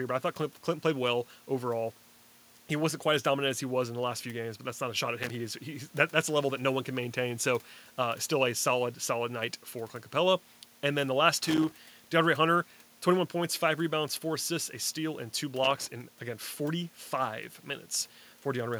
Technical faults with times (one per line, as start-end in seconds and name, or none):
5.23-5.35 loose connector crackle
11.43-11.72 loose connector crackle
15.64-15.87 loose connector crackle